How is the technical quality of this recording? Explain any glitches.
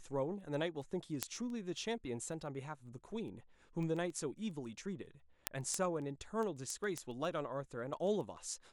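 The speech carries a steady train of word clock ticks from 0.13 s to 8.62 s, around 70 of them, roughly every 0.15 s. The receiver's clock seems to be drifting about 150 ppm from the sender's, slipping a single sample at each crossing. Unlike random clicks, these sharp ticks of uneven strength keep an even rhythm.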